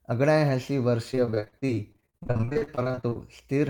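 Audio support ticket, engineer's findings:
Choppy, robotic texture from 1.11 to 3.17 s, dozens of short holes. Repeated packet loss on the network/jitter-buffer side: concealment extends the last sound over each gap, up to 41 ms, patching roughly 40% of the stretch.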